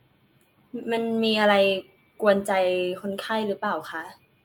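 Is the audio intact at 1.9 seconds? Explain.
Yes, the speech at 1.9 seconds is intact, with no dropout, click, distortion or other audible fault at that moment.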